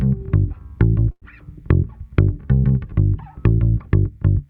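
From 1.11 to 1.24 s there is a call audio freeze. The sound before the break is carried on artificially and fades, with about 50 ms of silence in the stretch, then the audio resumes exactly where it stopped. Nothing is dropped; instead, everything after 1.24 s arrives about 104 ms later than before. This is likely the jitter buffer running dry while packets were delayed in transit, with the receiver filling the wait until they arrived.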